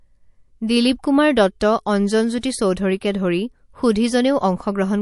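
Throughout the speech, the sound has a watery, swirling quality: the treble stops abruptly and weak detail flickers in and out from moment to moment. The likely cause is MP3 compression at a low rate, around 48 kbps. The encoder runs short of bits, cuts the top band and drops quiet frequency lines frame by frame. Unlike broadband hiss or a simple low-pass filter, this damage shifts and shimmers over time.

From 2.41 to 2.43 s, a short burst of hiss, about 21 dB above the surrounding floor, comes just before a sharp onset, and the attack itself sounds softened. This is pre-echo. The codec spread its noise across a whole block, roughly 48 ms long, so noise meant to sit under the loud attack also filled the quiet gap ahead of it. The encoder apparently never switched to shorter blocks. Unlike a click or dropout, the hiss comes before the attack and is tied to it.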